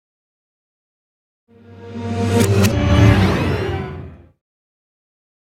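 At 2.71 to 2.73 s there is a skip ahead. About a second of audio never plays. Later audio was already queued, so that stretch was dropped, either in transit or by the jitter buffer when it overflowed. Playback jumps straight to the newer material with no filler. The two sides meet almost seamlessly, and the sound simply lurches forward. The delay falls by roughly a second at that point.

From 3.68 to 5.39 s comes a jitter buffer speed-up. The buffer held more audio than its target, so the receiver trimmed short pitch-period pieces again and again. The sound runs at about 115% speed with its pitch unchanged. Roughly a third of a second is removed over this span, and the audio sounds hurried until 5.39 s.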